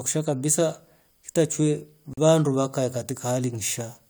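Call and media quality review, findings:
Gap at a join of encoded pieces, 2.13–2.18 s: about 40 ms silence cuts into continuous speech, edges smeared, speech resumes where it stopped. Likely separately encoded 4 s segments concatenated untrimmed, leaving encoder start delay and final-frame padding.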